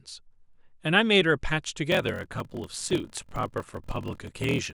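From 1.90 s to the end, a 41.7 Hz buzz appears and the speech slows to 0.889 speed at unchanged timbre: a block size mismatch (padded), with short writes, which fits 1024-sample blocks, zero-filled into larger reads.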